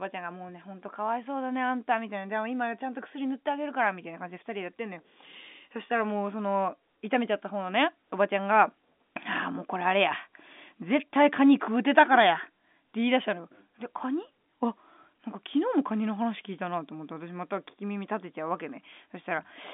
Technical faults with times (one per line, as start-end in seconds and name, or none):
none